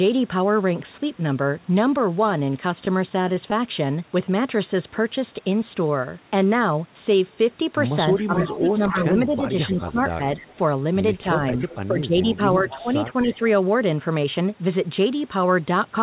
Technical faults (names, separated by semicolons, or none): repeated stalls (stutter); jitter buffer slow-down; echo leak; speech suppressed in double talk